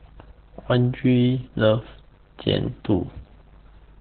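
A speech clip passed through Opus voice compression at what sounds like about 8 kbps, running in its SILK narrowband mode throughout. Nothing survives above about 4.4 kHz, so the speech is muffled, with hoarse, coarsely coded excitation giving it a heavy, slightly robotic roughness.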